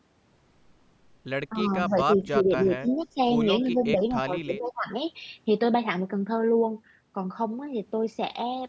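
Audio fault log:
1.51–1.70 s, 1.87–3.19 s, 3.68–4.87 s: speech suppressed in double talk. The voice dips by about 5, 15 and then 20 dB while a second talker overlaps, likely because the echo canceller cannot separate them and turns both down. The waveform envelope sags and the spectrogram shows thinned, gapped upper bands.
1.61–1.87 s, 2.13–2.40 s, 2.88–3.06 s, 3.65–3.84 s: echo leak. A faint copy of the voice returns 263 ms late at about 20 to 35 dB below the speech, likely loudspeaker pickup the canceller missed. The spectrogram shows weak, delayed repeats of the harmonic pattern.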